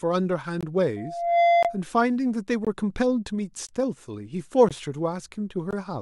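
Short, hard-edged holes in the speech at 0.61, 1.63, 2.65, 3.67, 4.69 and 5.71 s, each about 20 ms, are a gap between chunks: silence inserted at each join of 1-second blocks.

From 0.96 to 1.81 s, a steady 690 Hz tone swells over roughly 0.4 s to a few decibels above the speech. This is loudspeaker feedback squeal, where the microphone re-amplifies its own loudspeaker.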